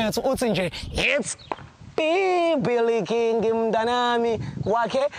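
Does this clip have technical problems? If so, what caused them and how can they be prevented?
Yes. At 1.04 s the sound turns duller, with nothing above 8.8 kHz and new background noise well below the signal. This is likely an input switched to a poorer device. Locking the input device before recording prevents it.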